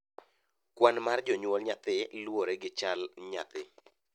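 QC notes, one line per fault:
No fault stood out on listening.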